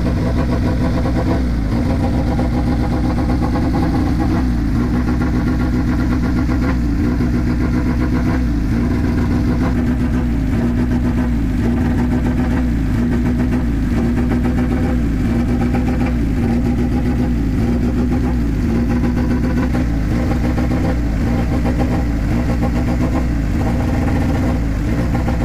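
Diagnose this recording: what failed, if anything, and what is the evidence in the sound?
Nothing in the signal points to a failure at any stage, from the wiring and converter through buffering, processing, transmission, storage or playback.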